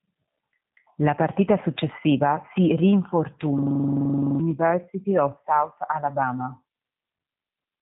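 Throughout, G.729 codec damage is plainly audible: a rough, synthetic speech texture consistent with 8 kbit/s frame-based coding. The spectrogram shows nothing above 3.8 kHz.

From 3.58 to 4.40 s, a system hang loop repeats one 42.7 ms chunk (which fits a 2048-sample buffer) at 23.4 Hz. It sounds like a machine-gun stutter, with identical repeating blocks in the waveform, and about 0.7 s of audio is lost.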